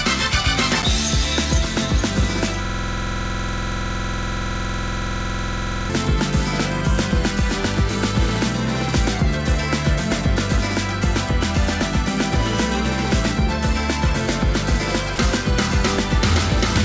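From 2.65 s to 5.90 s a system hang loop takes over. The computer or its audio driver stopped supplying new samples, while the sound hardware kept replaying the same stretch of its ring buffer. A 46.44 ms slice, which fits a 2048-sample buffer, repeats about 70 times at 21.5 Hz, producing a rapid, rigid rattle between a buzz and a machine-gun stutter. Packet-loss concealment would smear or fade the repeated sound. Here every cycle is an identical copy, and the sound resumes abruptly when the loop ends.

At 15.16–15.18 s the sound gives way for 20 ms to a thin patch of steady, featureless noise before continuing. This was likely sound dropped by the voice detector. The sender judged the moment to be background and stopped transmitting, and the receiver filled the gap with comfort noise. A lost packet would leave a click, a gap of silence, or a smeared repeat. This fill is smooth, level noise instead. 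Like the rest of the clip, which passed through a G.722 call codec, the noise has nothing above 8 kHz.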